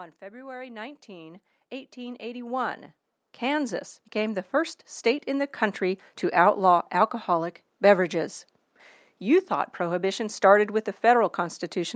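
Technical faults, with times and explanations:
0.19 to 2.86 s and 3.39 to 6.15 s, automatic gain rising: speech and the quiet room noise swell together, by about 11 dB then about 7 dB, as the gain control slowly lifts a level it judged too low.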